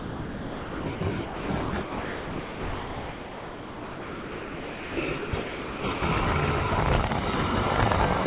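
Sound dropped by the voice detector at 0 to 0.86, 0.95 to 1.01, 1.25 to 1.49, 1.61 to 1.73, 1.82 to 4.97, 5.18 to 5.33, 5.42 to 5.84 and 5.93 to 6.02 s. The sound gives way to flat, steady noise each time and then returns. The longest gap lasts 3.15 s. The likely cause is a sender's detector treating the sound as background and sending only comfort noise. Across the clip, nothing is heard above 4 kHz, which fits a narrowband call codec.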